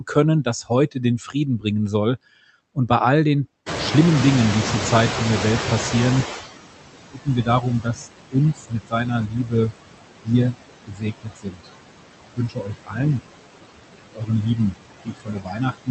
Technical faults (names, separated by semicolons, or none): noise suppressor artifacts; speech cut by the noise suppressor; noise suppressor catching up